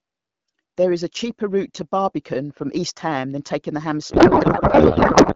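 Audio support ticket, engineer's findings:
Codec payload misread, 4.11 s to end: AMR-WB audio becomes garbled warble barely tracking speech. Octet-aligned packing read as bandwidth-efficient. Continuous, no gaps, unlike packet loss.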